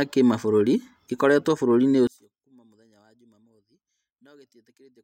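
One channel inverted from 2.07 s to the end of this speech clip: when the channels are summed to mono, the centred speech drops by about 34 dB and nearly vanishes, leaving only a faint residue, likely because one stereo channel's polarity is reversed.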